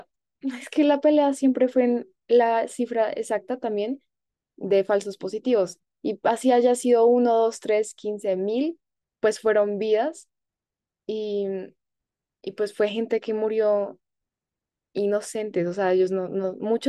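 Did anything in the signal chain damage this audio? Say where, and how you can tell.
No, nothing in the signal chain audibly damaged this speech recording; the signal arrives intact at every stage from capture to playback.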